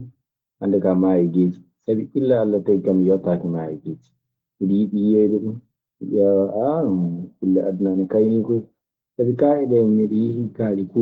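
No technical faults can be heard anywhere in the recording.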